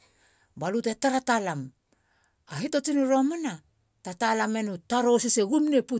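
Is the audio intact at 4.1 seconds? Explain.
Yes, the audio is intact at 4.1 seconds, with no dropout, click, distortion or other fault at that point.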